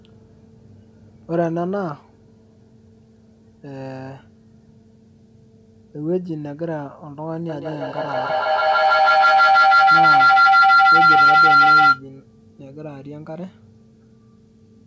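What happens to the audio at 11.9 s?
At 11.9 s a feedback howl is sounding, near the end of its run from 7.49 to 12.08 s. The loudspeaker feeds the microphone, and each trip adds level. A tone around 1.5 kHz builds as the loop repeats roughly every 150 ms, peaking about 13 dB above speech.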